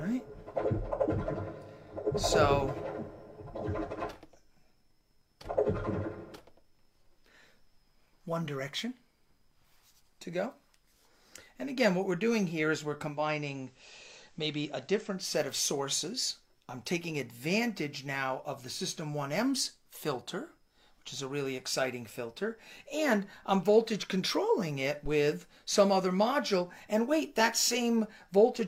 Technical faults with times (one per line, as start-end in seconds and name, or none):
13.04-15.34 digital radio blending to analogue
25.06-25.13 phantom power thump